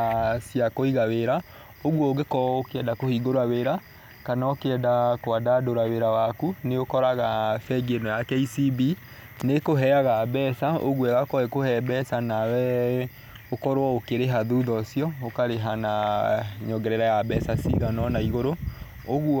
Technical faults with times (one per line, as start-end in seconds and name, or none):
12.13 repeated buffer